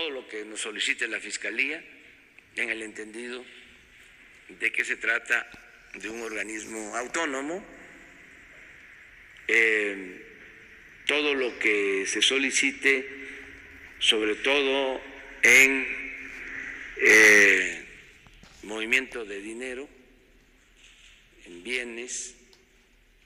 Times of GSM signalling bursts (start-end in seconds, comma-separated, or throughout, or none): none